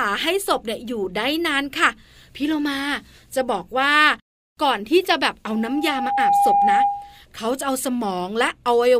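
From 5.48 s to 7.23 s the speech is overtaken by loudspeaker feedback squeal. A single tone at about 809 Hz rises out of the audio over roughly the first 0.7 s and then sits around 5 dB above the speech. The microphone was picking up the loudspeaker it feeds, and at that frequency the loop gain went past unity, so the tone kept reinforcing itself.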